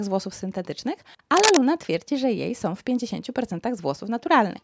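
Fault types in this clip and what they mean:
cable scratch noise: From about 1.37 to 1.59 s there's a dense, ragged burst of scratchy rustle sitting a few dB above the speech. It's likely a worn cable or connector getting nudged, with its contact resistance jumping around while it moves.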